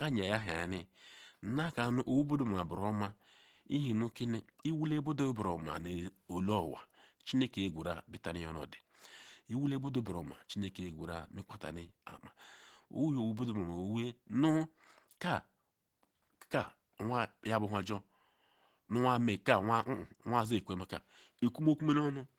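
From start to end the speech carries Opus compression artefacts, plainly audible throughout. The sound is muffled and hoarse, with a grainy, roughened texture in the upper range rather than swirling or hollow gaps. This is likely Opus running in its hybrid mode, where a speech coder handles the low band and a transform coder fills the top. The damage level fits a bitrate around 16 kbps, though the audio still reaches full bandwidth.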